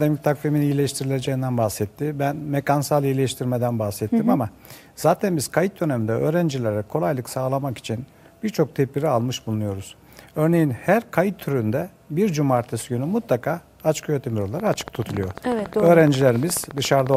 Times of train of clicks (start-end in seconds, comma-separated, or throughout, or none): 14.60-17.15